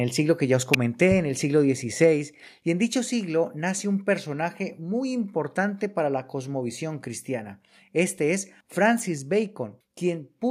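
A nearby switch or discharge likely arcing into the line causes an electrical switching spike at 0.74 s, after "siglo que ya os", heard as a sharp snap over the speech. Call software likely stepping down microphone volume lowers the level abruptly by about 3 dB at 2.04 s, between "en el siglo" and "y en dicho", and by about 1 dB at 3.06 s, before "nace un personaje muy". Another likely arc gives a second switching spike from 8.98 to 9.00 s, a brief tight crackle. A further likely microphone volume step-down at 9.18 s drops voice and background together by about 2 dB.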